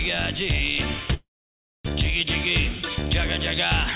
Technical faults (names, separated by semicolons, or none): long network dropout; jitter buffer speed-up